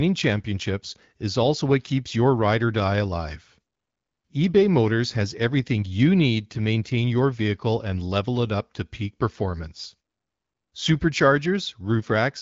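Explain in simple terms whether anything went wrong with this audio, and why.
Nothing went wrong with this audio, because the speech comes through the HD Voice phone connection just as it should.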